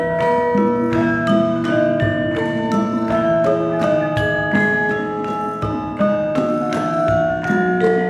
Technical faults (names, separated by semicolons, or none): none